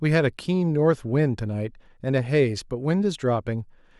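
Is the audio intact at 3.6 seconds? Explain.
Yes, the audio is intact at 3.6 seconds, with no audible fault at that point in the speech.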